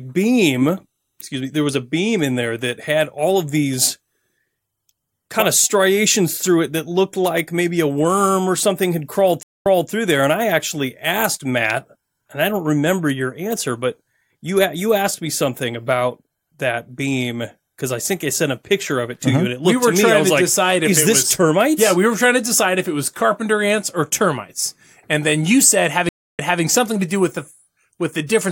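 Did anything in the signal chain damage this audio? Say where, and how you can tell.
Yes, two stream reconnects in the network stage: the connection dropped and a fresh decoder restarted, leaving 0.22 s silence after "or something had crawled" (9.43 s) and 0.29 s after "and then you said" (26.09 s). Each time, playback resumes about 0.25 s and 0.23 s earlier, repeating audio.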